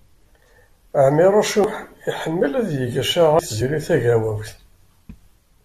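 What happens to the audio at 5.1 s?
At 5.09 s the speech skips forward: roughly 300 ms of audio is gone and the two sides butt together with no gap. This is likely audio missing between chunks, with the recorder dropping a piece while switching between its 2.0 s chunks.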